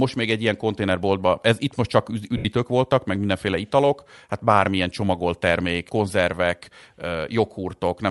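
Across the whole speech recording there is plainly audible codec damage with a grainy texture. It likely comes from Bluetooth LC3 compression, the transform codec used in Bluetooth LE Audio. LC3 splits the signal into short frames, converts each one to the frequency domain, and quantises the spectrum to fit a fixed bitrate. The artefacts heard here point to a rate around 48 kbps with 10 ms frames. The coarse spectral quantisation is what gives the sound its processed, synthetic quality.

From 2.37 to 2.46 s, a span of 80 ms, there are lost LE Audio frames, which fits eight consecutive 10 ms frames going missing. With no data arriving, the LC3 decoder conceals the gap. It repeats the last good spectrum with randomised signs and fades it down after the first few frames. The speech at that point is replaced by a brief noisy smear that carries the colour of the preceding sound but none of its detail, and then normal decoding resumes.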